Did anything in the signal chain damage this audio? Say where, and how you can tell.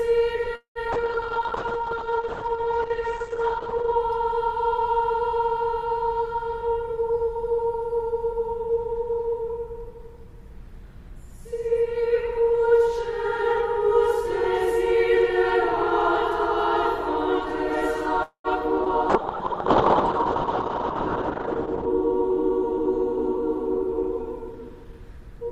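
Yes. The network stage shows repeated packet loss (robotic sound) from 0.55 to 0.95 s: three gaps, the longest 200 ms, with about half the span synthesised. On a waveform the sound turns into copied, repeating cycles with short holes, and a spectrogram shows smeared, comb-like harmonics.

A call bitrate drop in the codec stage runs from 0.96 to 4.02 s, falling from 48 to 9 kbps, and again from 19.10 to 21.95 s, down to 7 kbps. Opus narrowed the band from 20 kHz to 8 kHz, so the spectrogram loses everything above 8 kHz and the sound becomes rough and watery.

A jitter buffer slow-down at the receiver's buffer, from 1.37 to 2.58 s, plays back at 94% speed and adds 82 ms. It repeats single pitch periods, so the pitch stays the same while sounds are drawn out. On a spectrogram, events look stretched in time while the harmonics keep their spacing.

A jitter buffer speed-up, also in the buffer, runs from 6.50 to 8.78 s at 109% and removes roughly a fifth of a second. 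It happens again from 21.83 to 25.45 s at 104%, removing roughly 150 ms. Pitch periods are cut out, so the sound runs faster at the same pitch. A spectrogram shows compressed events with unchanged harmonic spacing.

A call audio freeze from 18.23 to 18.47 s is most likely the jitter buffer running empty while packets were held up on the network. The last sound continues as a fading buzz or hiss, filling 215 ms, the last 80 ms of it silent. Nothing is lost, and the waveform shows a decaying tail before the sound resumes.

A short concealed packet loss at 18.84 s removes 40 ms of sound. An 11 ms patch blends it over, and the delay shortens by about 30 ms. It is heard as a brief smear or wobble, and a spectrogram shows a narrow blurred slice.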